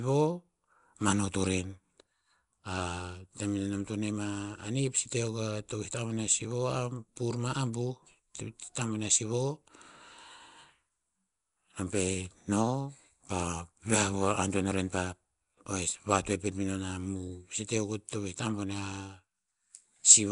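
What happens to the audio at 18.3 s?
At 18.3 s the speech carries the same rough, hissy halo and smeared, underwater quality heard across the whole clip, with nothing above about 10.6 kHz. This is likely Nellymoser compression, the old Flash microphone codec. It codes short blocks with too few bits and fills the weak bands with noise, and the result fits a rate around 44 kbps. Unlike MP3's swirly, metallic artefacts, the damage here is a grainy noise fill.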